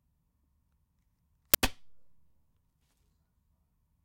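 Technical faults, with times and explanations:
1.54 s, uninitialised buffer: a brief, harsh, loud burst of digital noise, lasting about 11 ms, which fits one 512-sample buffer being sent to the output before any audio had been written into it, so whatever stale values sat in that memory were played as samples. Unlike a dropout, which leaves a gap of silence, or a single click from a discontinuity, this fills the whole block with loud junk content.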